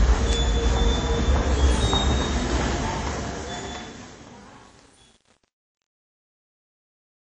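Throughout, the sound is washy and ringing with signal-following hiss and nothing above 10 kHz, plainly audible damage that likely comes from WMA compression at a low bitrate, around 32 kbps. From 2.95 s the fade out, starting near 3 s, shows truncation distortion: an undithered stage keeps about 8 bits, so from 3.29 s to 7.37 s the tail turns gritty.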